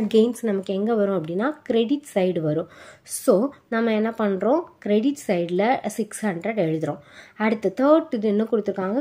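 No technical faults can be heard anywhere in the recording.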